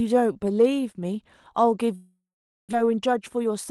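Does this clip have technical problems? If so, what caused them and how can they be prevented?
Yes. Packets likely stopped reaching the receiver, causing a long network dropout from 1.95 to 2.75 s. The last sound is stretched into a fading buzz, then about half a second of silence, and roughly 0.6 s never returns. A steadier connection with less congestion, or redundancy such as forward error correction, would prevent it.

A jitter buffer speed-up follows from 2.83 to 3.65 s. After the delay jumped by roughly 150 ms, the overfilled buffer cut pitch-period slices, so the audio runs about 13% fast at unchanged pitch, losing roughly a tenth of a second. Reducing delay spikes on the network path would prevent it.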